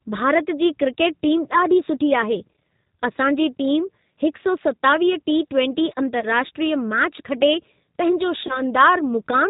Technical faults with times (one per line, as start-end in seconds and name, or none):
0.00-9.50 G.729 codec
6.20-6.25 VoIP packet loss concealed by the speech codec
8.47-8.62 VoIP packet loss concealed by the speech codec